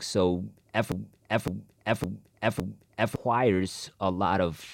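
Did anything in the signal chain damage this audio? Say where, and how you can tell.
Yes: the player or stream likely stalled and kept resending its last fragment, a broken-record loop. From 0.92 to 3.16 s, one 0.56 s piece repeats four times, replacing the speech that belonged there.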